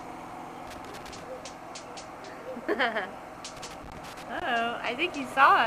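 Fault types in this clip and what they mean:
Loose connector crackle, 0.67 to 1.23 s and 3.57 to 4.43 s: a worn or dirty contact in the signal path keeps making and losing connection, so the audio is chopped into irregular bursts of scratchy crackle.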